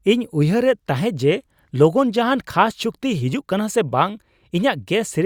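No technical faults can be heard anywhere in this speech recording.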